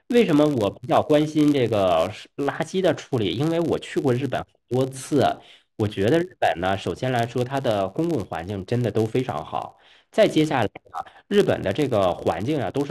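Throughout the recording, a filter restarted on every block discards its stored state and begins each block from silence, so a small transient lands at every boundary. The result is a steady buzz at about 93.8 Hz that rises and falls with the speech level, which fits a 512-sample buffer.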